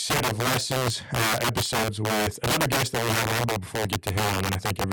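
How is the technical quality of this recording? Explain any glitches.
Poor: integer overflow runs through the whole speech recording. The signal is driven about 13 dB past full scale, and a small share of samples, around 7 percent, exceed the integer limit. Instead of being held at the ceiling, those samples wrap around to the opposite extreme. Every loud peak therefore jumps across the full range, producing violent, sharp cracks on the louder syllables. Ordinary clipping would flatten the peaks into a duller buzz, while these wrap-arounds snap.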